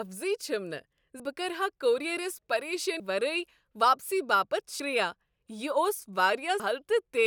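The speech skips at 1.2, 3.0, 4.8 and 6.6 s. Each time, about a fifth of a second goes missing and the two sides butt together. This is likely audio missing between chunks, lost as each 2-second block closes and the next opens.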